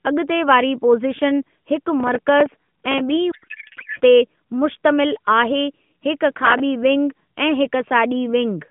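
From 3.32 s to 4.01 s the speech gives way to garbled, warbling noise that barely tracks it. This is a codec payload misread: the AMR frames were packed octet-aligned but decoded as bandwidth-efficient, so every field is read from the wrong bit positions and the decoder synthesises nonsense from valid-looking frames. Normal AMR narrowband speech, band-limited to telephone range and consistent with the 12.2 kbps mode, returns once framing agrees.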